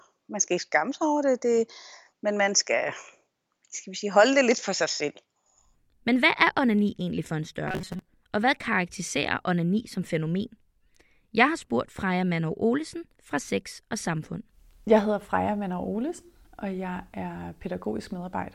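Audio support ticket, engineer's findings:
Robotic sound from repeated short buffers, 7.68 to 8.09 s, right after "onani egentlig for en". Rigid metallic buzz at 188 Hz that still loosely tracks the speech. Likely a playback buffer underrun: the same 5.3 ms chunk is replayed, about half the audio is repeated rather than new, and the missing input is skipped.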